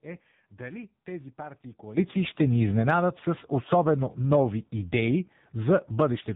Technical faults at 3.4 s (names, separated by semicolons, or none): AMR narrowband mobile codec; sudden gain jump